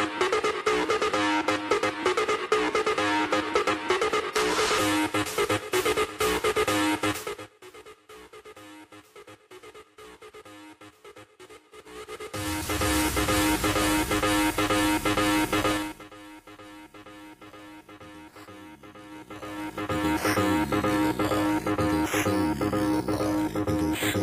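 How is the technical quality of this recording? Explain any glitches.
The recording has two stretches of zipper noise. From 11.70 to 12.91 s and from 19.04 to 20.16 s, a roughly 20 dB level move happens in 3 dB jumps, around seven a second, each clicking audibly.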